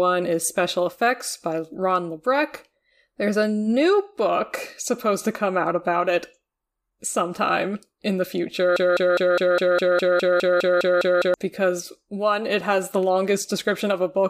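From 8.76 to 11.34 s, after "sometime in the", a broken-record loop repeats one 204 ms fragment 13 times, likely a stalled stream, tiling identical spectrogram blocks.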